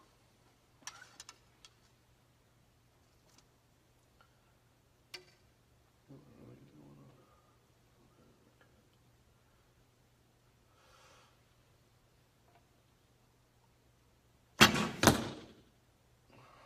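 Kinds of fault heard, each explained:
Nothing stood out on listening to this recording.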